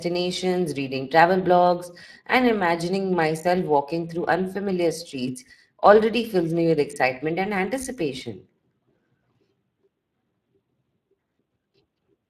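Speech running the full 12 seconds carries plainly audible Speex codec damage throughout. The CELP coder rebuilds each stretch from a predicted filter plus a coarsely coded excitation, leaving the sound grainy and less natural. The sound suggests a bitrate of something like 22 kbps. On a spectrogram the energy stops at a hard ceiling near 15.3 kHz, with harmonics looking smeared. The waveform shows no single event, since the fault is continuous.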